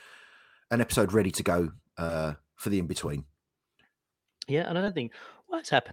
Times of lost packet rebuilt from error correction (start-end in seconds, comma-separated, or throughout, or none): 0.77-0.79, 2.09-2.11, 4.86-4.88